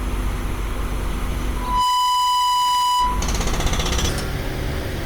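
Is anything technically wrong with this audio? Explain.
Yes, there are two faults.

From 1.56 s to 3.34 s there is loudspeaker feedback squeal. A microphone is picking up the loudspeaker it drives, and the loop gain exceeds one at 993 Hz. That tone builds over about a third of a second into a steady squeal roughly 5 dB above the surrounding audio.

From 4.09 s to the end, a section plays at the wrong speed, at 1.54 times normal rate. Pitch and tempo rise together by about seven semitones, so the sound turns high and hurried. The likely cause is playback or editing against a mismatched clock.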